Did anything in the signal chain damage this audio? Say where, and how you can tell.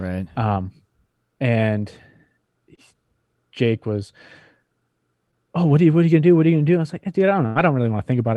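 Yes. The damage happened on the network, after the call codec. Each packet of the call carries a short slice of audio, and some of those packets never arrived in time to be played.

Short concealed packet loss shows at 2.75 to 2.79 s and at 5.31 to 5.34 s, just before "oh what are you". Each is a brief smear or wobble. About 20 ms went missing each time. The receiver stretched the previous sound across the hole, then blended back.

A burst of packet loss hits at 7.46 to 7.57 s, right after "was like dude I". About 100 ms never arrived. The decoder held the last sound and faded it down. Then the audio resumes further on, with that stretch simply gone.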